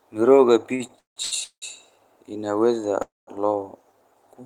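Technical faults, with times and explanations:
0.75 to 1.64 s, repeated stalls (stutter): the speech halts five times in under a second, and about 504 ms of concealment fills more than half that span, the longest pause 182 ms. Packets arrived more slowly than they were played, so the jitter buffer kept running dry and the receiver stretched the last sound each time. Nothing is lost; the audio just drags. A spectrogram shows short smeared, flat-topped patches breaking the normal patterning, and the waveform shows repeated looped or fading stretches.
3.02 to 3.29 s, call audio freeze: the speech stops for 254 ms and then resumes exactly where it left off, with nothing skipped. For the first part, the last sound is held as a fading buzz or hiss, and about 190 ms of the gap is silence. The likely cause is delayed packets emptying the jitter buffer, and the whole remainder of the clip arrives 254 ms later than it should. 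A spectrogram shows a brief frozen smear and then a blank band, and the waveform collapses to near zero before the speech returns.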